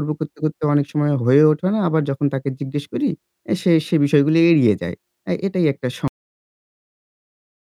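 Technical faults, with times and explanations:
6.08 s, cut-off end: the speech stops mid-sound and drops straight to digital silence with no decay, because the final buffers were never written or played.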